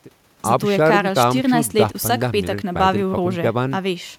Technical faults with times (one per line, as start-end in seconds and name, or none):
none